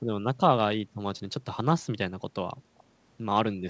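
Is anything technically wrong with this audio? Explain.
Yes. There is a likely echo leak: the far end seems to play the call over a loudspeaker, and its echo canceller did not fully remove what its microphone picked up, so a leftover copy was sent back. Between 2.78 and 2.83 s, a short scrap of delayed voice arrives about 250 ms after the original, roughly 35 dB below the speech. Across the clip, nothing is heard above 8 kHz, which fits a wideband call codec such as G.722.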